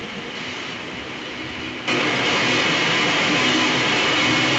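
Throughout, a copy of the speech follows about 0.22 s later, roughly 10 dB louder. This echo leak likely comes from an uncancelled loudspeaker.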